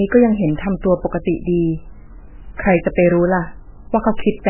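From start to finish, the speech has likely been squeezed through MP3 compression at a starved bitrate, heavy damage that fits something near 8 kbps. The encoder discards everything above 3 kHz, leaving muffled, dull speech, while weak frequency lines flicker frame to frame into a watery, swirling texture with smeared consonant attacks.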